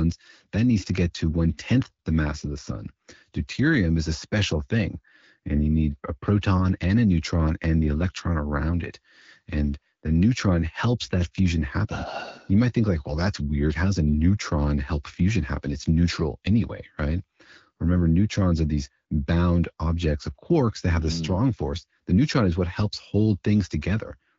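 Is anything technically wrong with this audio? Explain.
No, nothing stood out as technically wrong on listening to this speech clip, which comes across as the clear, band-limited sound typical of AMR wideband (HD Voice) at 12.65 kbit/s.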